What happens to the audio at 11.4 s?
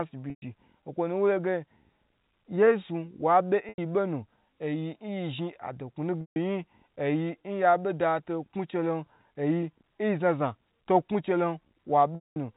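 Nothing goes wrong at 11.4 s: the speech carries on intact through that moment, still with the narrow telephone bandwidth of G.711 coding.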